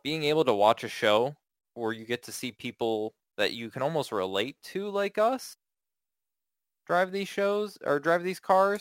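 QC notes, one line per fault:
Throughout, crude rate conversion: a gritty, inharmonic fizz tracks the speech, strongest on loud and bright sounds, around 25 dB down. Samples were repeated without filtering, in a pattern fitting a 44.1 kHz to 48 kHz change, making tones unrelated to the voice.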